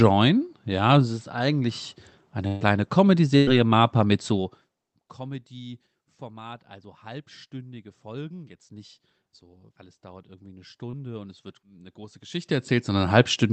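From 2.47 to 2.63 s, just after "es ist eigentlich", a burst of packet loss stretches the last sound and fades it for about 135 ms. A second burst follows from 3.37 to 3.49 s. In both, roughly 140 ms and 100 ms of speech are skipped. On a spectrogram each shows a smeared continuation that decays, then an abrupt jump.

Between 10.91 and 10.95 s, after "es dauert irgendwie eine" and before "und es wird eine", short concealed packet loss briefly smears the sound. It appears as a tiny blurred patch about 20 ms wide. The Opus call path is audible as energy stopping at 8 kHz.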